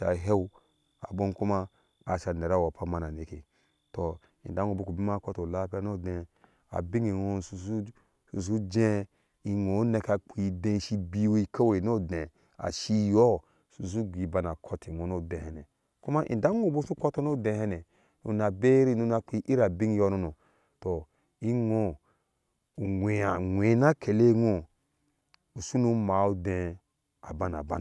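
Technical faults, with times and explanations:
No technical faults are audible anywhere in this speech recording.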